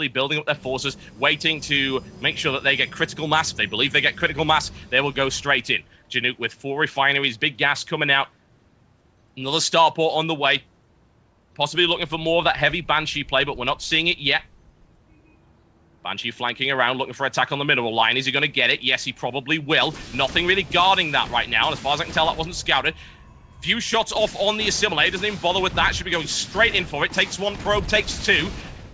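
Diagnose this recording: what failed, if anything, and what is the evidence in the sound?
Nothing in the chain failed.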